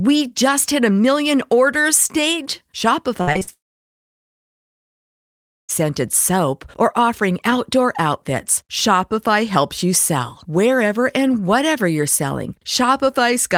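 A speech recording whose trouble begins at 3.21 s, where repeated packet loss gives a robotic, choppy stretch lasting until 3.49 s. Four short holes, the longest 55 ms, are patched by stretching the preceding sound, so half the span is synthetic. Because audio keeps returning between holes, this is not a single dropout. Almost immediately after, from 3.53 to 5.71 s, comes a long network dropout, likely a stall in delivery. After a brief fading continuation, about 2.1 s falls to silence, unlike the flickering loss before it, and speech resumes at "soap or offering outdoor" with the intervening portion gone.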